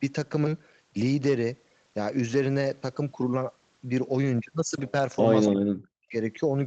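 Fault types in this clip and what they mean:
Echo leak: Around 5.46 to 5.51 s there's a brief scrap of delayed speech, lagging by about 268 ms and sitting roughly 10 dB below the main voice. That's likely the far end's loudspeaker feeding its mic, with the echo canceller letting a fragment slip back.
Speech suppressed in double talk: Right after, from 5.52 to 6.14 s, the voice drops out in pieces for about half a second, dipping by around 40 dB at worst. It's likely the echo canceller confusing overlapping talk with echo and ducking everything together.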